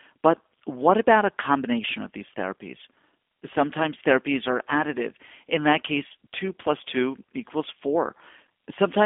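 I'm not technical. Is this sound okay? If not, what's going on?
No. The whole recording sounds like it came through a low-quality internet phone call, the result of a G.729 codec. This system doesn't send the real sound. It sends a rough description of how the voice is shaped and rebuilds speech from that, so it comes out slightly buzzy and artificial. Everything above about 3.6 kHz is gone, which makes it thin. A simple phone line would sound just as narrow but clean. This one has the codec's rough texture too.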